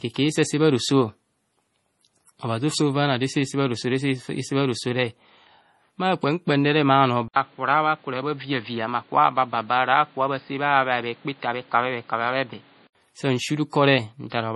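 From the first moment the speech carries the swirly, smeared highs and slightly watery consonants of heavy MP3 coding, and nothing survives above 11.4 kHz. That pattern points to low-bitrate audio saved at a high bitrate, likely a 32 kbit/s MP3 later re-encoded at 256 kbit/s. The larger second encode cannot restore what the first discarded. On a spectrogram the energy stops at a flat horizontal ceiling near 11.4 kHz, with blotchy, patchy texture below it where the first encoder dropped detail.

At 7.28 s the sound cuts out for 80 ms and returns duller and boxier, roughly 5 dB quieter, with a new hiss about 30 dB below the speech. This is an input switched to a poorer device, likely a change to a lower-grade microphone or a headset call profile. The band narrows sharply, with nothing above 4.9 kHz, until 12.95 s. A spectrogram shows a gap, then the ceiling dropping from 11.4 kHz to 4.9 kHz, with a raised noise floor filling the quiet stretches. 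The waveform shows a brief flat line and then a visibly smaller envelope.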